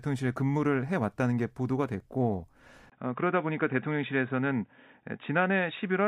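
Input switched to a poorer device at 2.90 s, lasting to the end: after a 20 ms gap, the speech turns dull and boxy, with nothing above 3.8 kHz and a faint new background noise at much the same level, likely from the recording moving to a narrower-band microphone.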